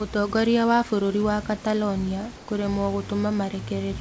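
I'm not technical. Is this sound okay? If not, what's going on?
No. At 2.36 to 2.48 s the call system likely paused sending during a gap in the speech, and the receiving end filled in synthetic hiss: comfort noise in place of the background. For that eighth of a second, the real room sound becomes a flat, featureless noise at almost the same loudness.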